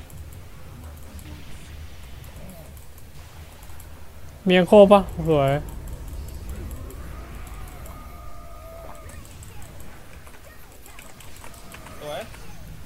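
No faults detected anywhere in the clip.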